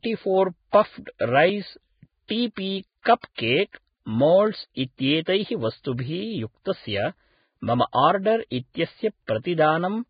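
Throughout the speech, a low-quality lossy encode, likely Vorbis, has cut the treble and quantised what remains very coarsely; the damage is heavy and fits a very low bitrate of around 15 kbps. Nothing survives above 4.9 kHz, so the sound is dull on top, while the band just below that cut-off has lost its fine detail and been replaced by noise of similar energy. The result is grainy and hissy, with roughened tones and blurred onsets.

From 2.28 to 2.30 s, a sharp attack lands late in a transform block, and the coding noise sized for that loud moment is spread back across the quieter lead-in. This pre-echo is a hiss lasting 22 ms just before the attack, which arrives softened and smeared. The same thing happens from 3.02 to 3.06 s, where the pre-echo runs longer, about 36 ms, so the hiss ahead of the onset lasts further back.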